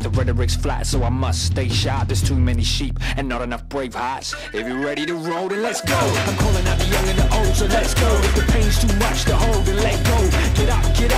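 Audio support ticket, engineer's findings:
No audio faults found in this clip.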